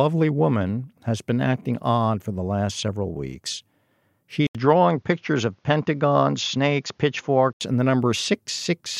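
At 4.47 s the speech drops out for about 80 ms, then returns dulled, with nothing above 7.1 kHz and a new faint background noise, at an unchanged level, until full band returns at 7.61 s. The gap and changed noise floor likely mark an input switched to a poorer device, not a simple filter.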